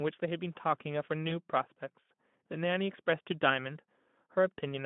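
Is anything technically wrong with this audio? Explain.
Yes. VoIP packet loss concealed by the speech codec occurs from 1.29 to 1.33 s. A gap fitting one lost 20 ms frame was filled by the Speex decoder extending its last pitch and filter at falling gain, giving a brief buzzy or noisy, smeared stretch that stays weak just after.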